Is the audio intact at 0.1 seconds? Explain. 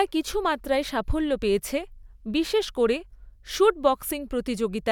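Yes, the speech at 0.1 s is intact, with no dropout, click, distortion or other fault at that moment.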